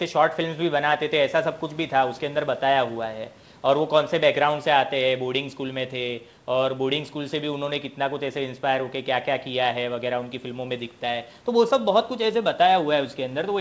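No faults are present in the speech; the band stops at 8 kHz, consistent with a wideband call codec and the call's microphone processing working as expected.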